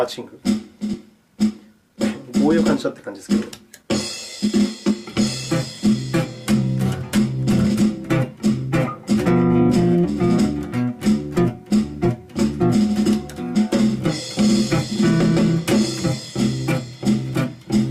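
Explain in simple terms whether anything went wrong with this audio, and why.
Two things went wrong, both caused by the audio arriving unevenly over a network.

First, a skip ahead at about 0.93 to 0.95 s. Roughly a second of audio never got played. It was lost on the way, or thrown out when the receiver's waiting area overflowed. Playback jumps straight from before the gap to after it. Nothing fills the hole, so the two sides are stitched almost directly together.

Second, several stretches of jitter buffer speed-up. The receiver had stored up more audio than it wanted, which adds delay. To catch up, it quietly cut out many tiny slices of sound, one after another. The pitch stays the same, but the sound runs a little fast and can feel rushed. From 1.07 to 4.93 s it plays 7% fast, losing about a third of a second. From 5.87 to 6.52 s it plays 4% fast. From 7.33 to 9.98 s it plays 3% fast, losing about a tenth of a second.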